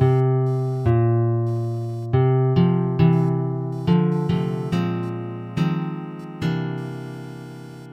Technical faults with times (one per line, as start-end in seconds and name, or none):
0.00-7.92 computer activity noise